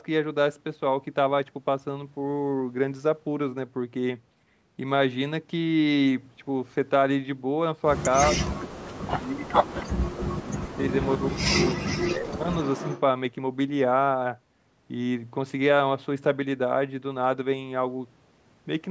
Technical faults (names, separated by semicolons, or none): speech suppressed in double talk; echo leak